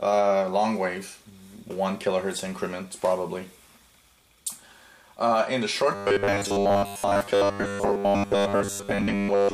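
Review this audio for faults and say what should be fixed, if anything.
From 5.95 s to the end at 9.53 s, new audio was likely arriving too seldom, so playback filled the gaps by replaying a short buffer, about 10 ms, skipping much of the real signal. This gives robotic sound from repeated short buffers: a rigid, metallic buzz at 100 Hz.

Keep a larger playback buffer with enough headroom that fresh audio always arrives before the previous block runs out.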